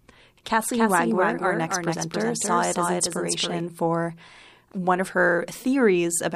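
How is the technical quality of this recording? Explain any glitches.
The recording has one clear glitch: a doubled audio track from 0.72 s to 3.60 s, starting just before "for one of". A second full-band copy of the speech runs about 300 ms behind, roughly 5 dB quieter, with no reverb tail. It switches on and off abruptly. The likely cause is the signal being captured twice through a slower path, or an edit leaving two misaligned copies.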